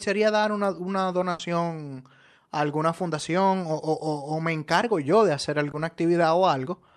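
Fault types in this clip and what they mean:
Burst of packet loss: Around 1.31 to 1.41 s, about 80 ms of speech is lost. The decoder continues the last sound and fades it out, then jumps ahead. On a spectrogram it shows as a smeared, fading continuation before a sudden restart.
Short concealed packet loss: Right after "encargo yo de hacer", at 5.71 to 5.75 s, a 20 ms hole is filled by continuing the preceding sound. It is heard as a brief smear, and it shows as a tiny smeared patch in the waveform and spectrogram.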